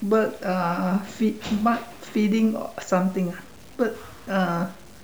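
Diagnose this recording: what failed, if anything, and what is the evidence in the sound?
What failed is the sample-format conversion: the speech has been squeezed down to low bit depth without dither, across the whole clip. You can hear a grainy, rough edge riding on the speech the entire time, tracking its loudness. That error sits only around 30 dB below the signal. The likely cause is a plain truncation to something like 7 bits, so the rounding error stays locked to the waveform instead of being smeared into a steady hiss.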